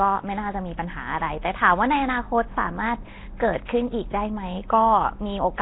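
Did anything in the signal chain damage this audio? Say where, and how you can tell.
Yes, at the codec stage, likely Nellymoser compression: starved bands are filled with noise, so the speech sounds hissy and underwater throughout, with nothing above 3.9 kHz, fitting about 16 kbps.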